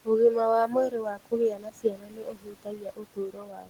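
Noise suppressor artifacts run throughout. The suppressor pulls the steady room noise down by about 19 dB frame by frame, so the background pumps. Speech cut by the noise suppressor starts at 0.05 s and lasts to 0.47 s, with about 200 ms of speech dipping by up to about 16 dB. From 0.66 s to the end, it mistakes more soft speech for noise and cuts it by up to about 19 dB, so those parts sound swallowed.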